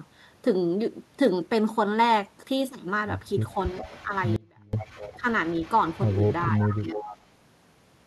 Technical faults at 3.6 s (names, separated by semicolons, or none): echo leak